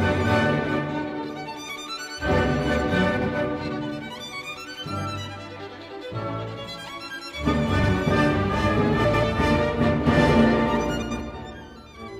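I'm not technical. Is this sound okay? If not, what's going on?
No. There are four brief glitches caused by frames out of order, at 3.17, 7.79, 9.04 and 11.01 seconds. At each spot, two tiny neighbouring slices of sound play in swapped order. You hear a short garbled flutter. It lasts about 0.1 seconds at the first two spots and 0.2 seconds at the last two. Nothing is lost.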